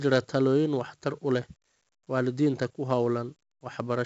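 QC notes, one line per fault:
Throughout, 4-bit ADPCM compression: heavy gritty hiss rides on louder speech, consonant attacks sound roughened, and nothing reaches above 7.7 kHz. Each sample is a coarse step from a prediction, so noise tracks level and lags sharp onsets; the band limit fits a 64 kbps stream.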